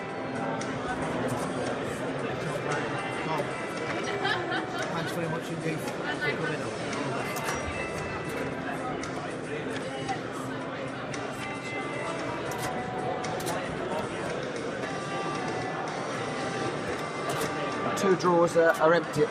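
No technical faults can be heard anywhere in the audio.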